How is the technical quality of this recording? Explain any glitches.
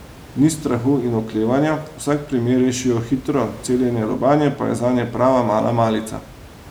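No technical faults are audible.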